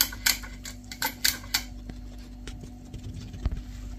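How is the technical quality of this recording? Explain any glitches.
The technical quality holds up, with no glitches to explain.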